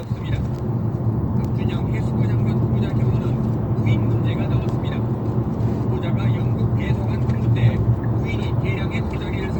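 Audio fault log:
throughout Opus compression: likely low-bitrate Opus music-mode encoding, fitting around 24 kbps, fills starved bands with folded or noise content, so tones turn rough and grainy.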